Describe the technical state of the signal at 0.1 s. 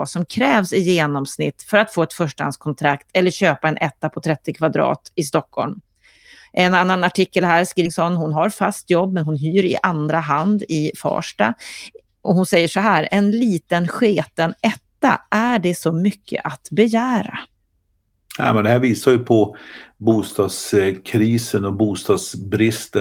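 At 0.1 s the speech signal is intact, with no technical fault to be heard at that moment.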